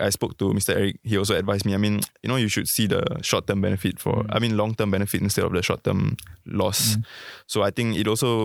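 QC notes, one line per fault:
No faults detected.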